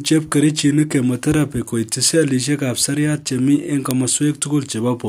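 At 3.91 s a sharp click marks a file header played as audio: header bytes from a joined WAV segment were decoded as samples, giving a brief, loud snap.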